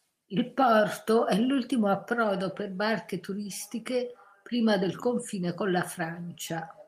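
No technical faults are audible.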